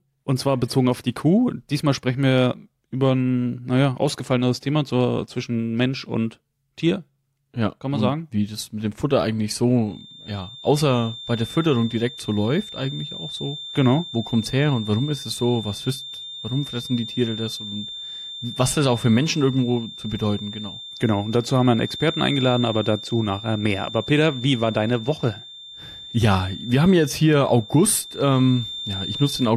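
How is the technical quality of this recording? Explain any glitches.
The recording has one fault: a feedback whistle. From 9.82 s to the end, a thin, steady 3.6 kHz tone sits roughly 15 dB below the speech, slowly swelling and fading. The likely cause is a loudspeaker-to-microphone loop held just short of runaway feedback.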